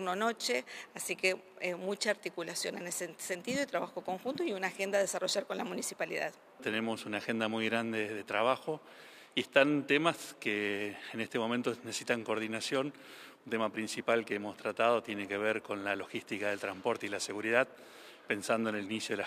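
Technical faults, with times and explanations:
Nothing here to flag: no technical faults turn up anywhere in the audio.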